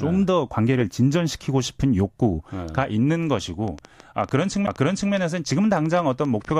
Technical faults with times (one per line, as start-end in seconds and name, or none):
3.68-6.60 train of clicks
4.66 CD skip